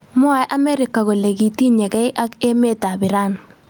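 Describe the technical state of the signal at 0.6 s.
At 0.6 s the speech is affected by gain pumping, which runs through the whole clip. The level swings by around 15 dB. Loud and quiet passages sit unnaturally close together, so the speech sounds squashed. The likely cause is input gain set far too high, with a fast limiter or compressor clamping down on every peak.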